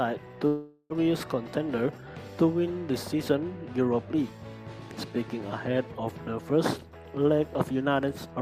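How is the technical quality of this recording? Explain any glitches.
Two transmission glitches stand out early in the recording.

From 0.47 to 1.04 s there is a long network dropout, likely the cause of what is heard: the last sound is stretched into a fading buzz or hiss for roughly 0.43 s while about 400 ms of audio never arrives, then playback resumes past the gap with that stretch missing.

From 1.48 to 1.99 s a jitter buffer speed-up follows. The receiver trims short pitch-period slices repeatedly to shed excess buffered delay, about 50 ms in total, so the sound runs at 108% speed with unchanged pitch and feels briefly hurried.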